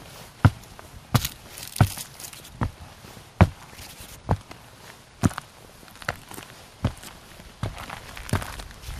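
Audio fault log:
No fault found in the audio.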